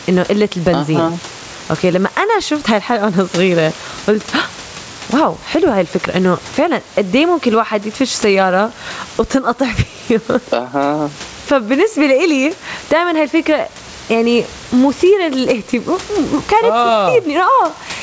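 The clip is speech carried over a call, and it suffers from gain pumping from start to finish. The swing is large, around 15 dB. Loud and soft passages sit unnaturally close in level, so the sound feels squashed. The likely cause is input gain set far too high, with a fast limiter clamping down on each loud sound. The room noise sits about 33 dB below the speech. The audio stops at 8 kHz, which fits a G.722 call codec.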